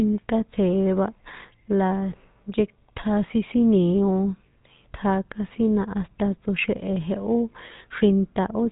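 From start to finish the speech carries the sound of the GSM full-rate codec, with plainly audible damage. This vocoder rebuilds the voice from a vocal-tract filter excited by evenly spaced pulses, and it keeps only a thinned excitation, giving a buzzy, gravelly roughness. Its rate points to the 13 kbps full-rate mode. On a spectrogram, energy stops sharply at 3.8 kHz, leaving empty space above, and harmonics below look smeared and grainy.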